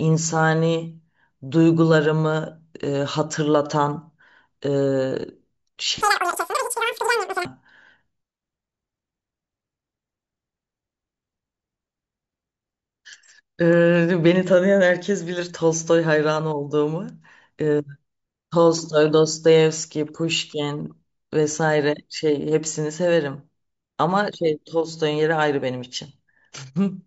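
Speech with a wrong sample rate from 6.01 to 7.45 s: it jumps about 17.6 semitones higher and runs 2.76 times faster, which fits 16 kHz audio played at 44.1 kHz. A spectrogram shows the harmonics stretched upward and the waveform squeezed in time.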